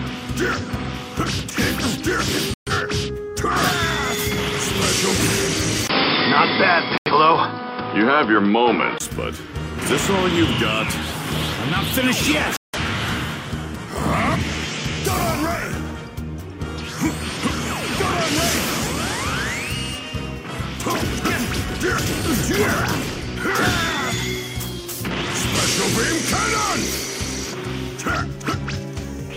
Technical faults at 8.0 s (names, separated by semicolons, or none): input switched to a poorer device